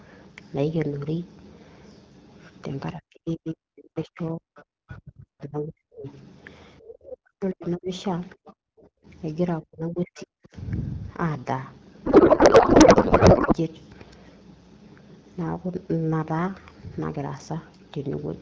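Speech over a call, with three kinds of fault. An echo canceller that likely could not tell the talker from loudspeaker echo during double talk turned both down. The result is speech suppressed in double talk at 2.93–6.06 s, 6.82–9.07 s and 9.61–10.55 s, with drops of about 40 dB. Around three seconds of the first stretch and roughly a second of each later one dip or break up. Residual echo that the canceller likely failed to remove lets the other side's voice leak through. It comes as a longer stretch from 3.48 to 5.44 s, about 25 dB below the talker, and as brief scraps at 7.66–7.70, 8.45–8.53 and 10.17–10.23 s, about 20 dB down. From 12.05 to 13.54 s the codec payload is misread: the decoder unpacks the AMR-WB bits in the wrong layout, which fits octet-aligned frames being read as bandwidth-efficient. The speech there gives way to garbled noise and warble that barely tracks it.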